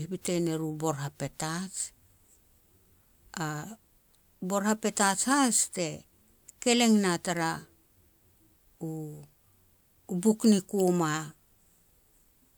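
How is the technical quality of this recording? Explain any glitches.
The technical quality of the recording is sound, with no glitches to explain.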